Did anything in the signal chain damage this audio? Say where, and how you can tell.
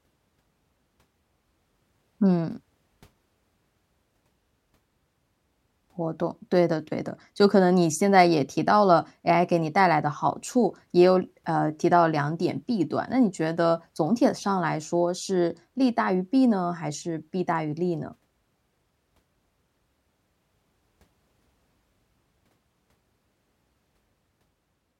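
No, nothing in this speech recording stood out as damage from any stage of the signal chain when I listened to it.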